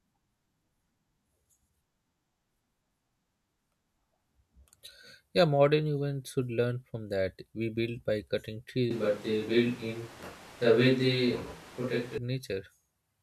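This is a speech clip. From 8.91 s to 12.18 s, just after "build by cutting trees", the sound turns suddenly roomy and hollow, with thinner bass. The level stays about the same. Room noise rises to roughly 20 dB below the speech. Then it switches back abruptly. This is likely a switch to a distant microphone.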